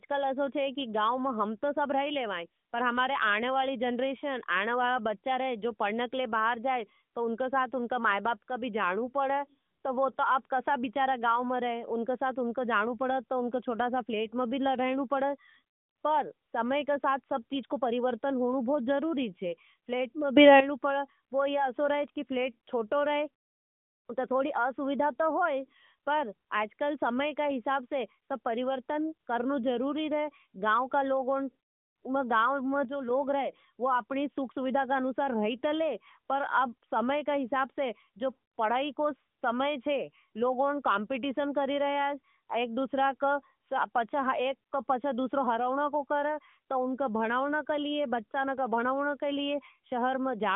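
Speech heard through a narrowband mobile path, with nothing above about 3.6 kHz. There are two sudden gain jumps. At 20.37 s, after "फ्लेट में", the voice and background leap up together by about 12 dB, lasting to 20.60 s before "पड़े वो यह असो". At 32.85 s the level drops by about 6 dB until 33.10 s, just before "रहे वो". The likely cause is a gain setting applied without a ramp.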